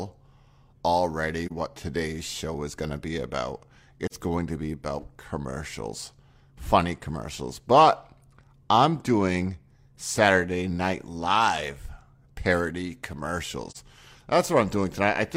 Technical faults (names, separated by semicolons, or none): AAC frame loss with muting